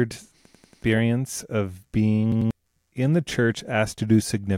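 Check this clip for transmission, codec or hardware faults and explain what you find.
Two hard-edged stutters occur, at 0.46–0.84 s and at 2.32–2.51 s just before "in the". In each, a 93 ms slice of speech repeats, four and then two extra times. This is a repeated buffer: new audio arrived late, so the device replayed its last block. The repeat length fits a 4096-sample buffer. Roughly 0.4 s and 0.2 s of speech are lost.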